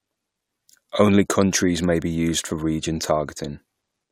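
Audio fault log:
Nothing to log here; the speech comes through without any technical trouble to point out.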